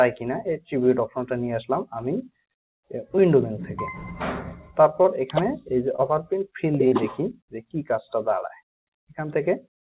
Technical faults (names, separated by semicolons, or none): short concealed packet loss; sound cut by the noise suppressor